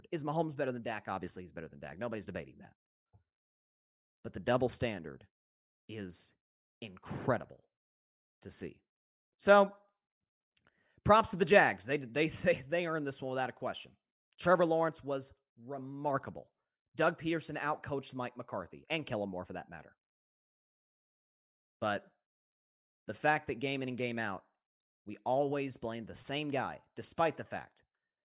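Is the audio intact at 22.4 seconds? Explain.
Yes, the speech at 22.4 seconds plays through cleanly, with no audible fault at that moment.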